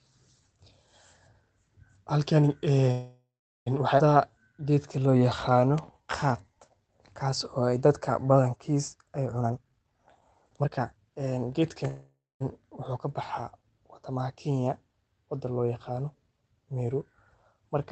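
At 2.91 s packets likely stalled and the jitter buffer ran dry, producing a call audio freeze. The last sound stretches into a fading buzz, then about 0.4 s of silence, and resumes at 3.68 s with nothing lost. At 3.98 s a skip ahead drops roughly 0.4 s of audio, so playback jumps forward almost seamlessly. The jitter buffer then rebuilds its reserve by repeating pitch periods. This jitter buffer slow-down plays 4.18 to 6.83 s at 87% speed, adding 0.36 s, and 7.23 to 8.24 s at 94%, adding 70 ms, so sounds drag at unchanged pitch. From 9.40 to 11.85 s an overfull buffer trims pitch periods in a jitter buffer speed-up at 128%, removing roughly 0.7 s and making the audio sound hurried. A second call audio freeze follows from 11.87 to 12.42 s: 0.53 s is inserted, fading into about 0.22 s of silence before the audio picks up where it stopped. Throughout, the call codec path limits the top end to about 8 kHz.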